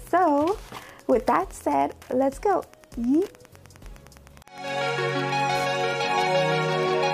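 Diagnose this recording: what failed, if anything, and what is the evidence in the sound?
The fault is Wi-Fi interference in the analogue wiring. A nearby radio's transmissions are being rectified by the audio circuit, producing a steady tick that repeats every 102.4 ms, about ten times a second, from start to finish. The ticking sits roughly 30 dB below the wanted sound. On a spectrogram it appears as thin vertical broadband lines at even spacing across the whole clip. The waveform shows small, regularly spaced spikes riding on the signal.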